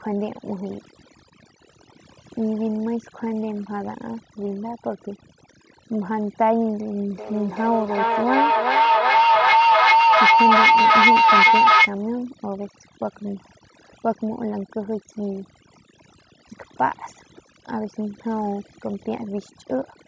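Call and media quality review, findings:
Overdone noise removal, throughout: suppressor set too aggressive, gating bands near its noise estimate, taking quiet speech detail too. Background dropped, broken into twinkling specks.

Feedback howl, 7.17–11.97 s: two devices in one room sharing the call, mic-to-speaker loop gaining level each pass. Tone near 1 kHz, loop repeat roughly 400 ms, peaking about 9 dB above speech. Band limit at 8 kHz from call mic processing fits 16 kHz sampling.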